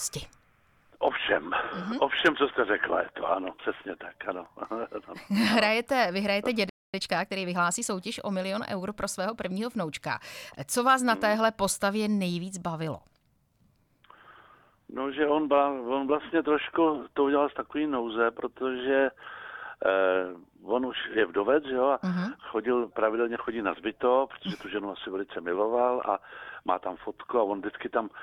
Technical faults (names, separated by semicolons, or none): playback stall; time-compressed catch-up